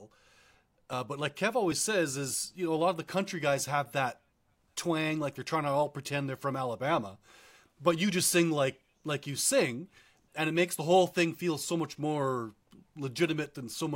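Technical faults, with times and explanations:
0.93 s and 1.72 s, dropped buffer (overrun): at each point the speech skips ahead with an abrupt jump, just before "but like" and again just before "says is you know". Roughly 50 ms goes missing at the first and about 20 ms at the second. Nothing was filled in. The two ends of the audio are butted together. This is likely because the recording software fell behind and the hardware overwrote samples before they were read.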